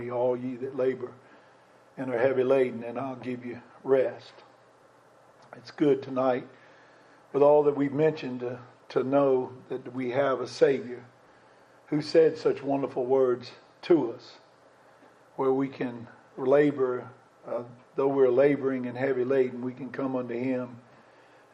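No technical faults can be heard anywhere in the recording, and the signal holds steady throughout.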